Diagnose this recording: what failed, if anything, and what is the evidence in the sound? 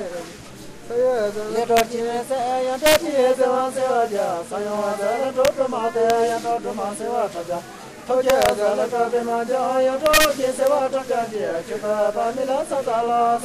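Integer overflow in a fixed-point gain or sample-format conversion stage produces violent cracks at 1.77–1.80, 2.86–2.96, 5.45–5.48, 6.10, 8.30–8.49, 10.06–10.25 and 10.67 s. Loud peaks pushed only about 0 to 4 dB past full scale wrapped to the opposite sign instead of being limited. On a waveform each peak jumps from one rail to the other. A spectrogram shows full-band vertical streaks, much sharper than flat-topped clipping.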